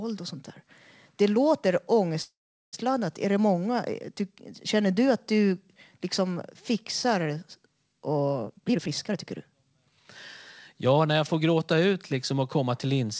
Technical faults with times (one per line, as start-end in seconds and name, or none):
2.22-2.75 call audio freeze
8.46-9.93 jitter buffer speed-up
10.74-11.49 jitter buffer speed-up